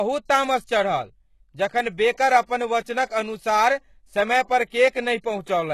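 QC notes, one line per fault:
Throughout, HE-AAC compression: nothing above 12.3 kHz, and s sounds turn gritty and metallic rather than dull, likely from treble rebuilt from lower bands at a bitrate near 16 kbps.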